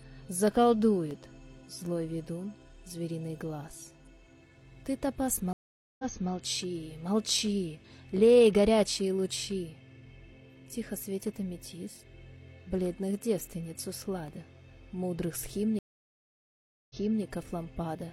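At 1.11 s the audio drops out for a tiny instant, heard as a sharp tick where the waveform snaps to zero and back with no fade. This is a block of digital silence, a gap of 2.9 ms that fits a 128-sample buffer the playback chain failed to fill in time. A second, even shorter tick at 14.28 s is the same fault, 1.45 ms long, consistent with a 64-sample block left empty.

At 5.53 s the sound stops for 459 ms, and when it returns it picks up 325 ms earlier than where it broke off, so a short stretch is heard twice. That jump back is the signature of a stream reconnect: the connection dropped, the player went quiet, then rejoined and restarted its decoder from data the server sent again. At 15.79 s a longer reconnect silences the audio for 1.11 s, and playback again resumes 325 ms behind the break.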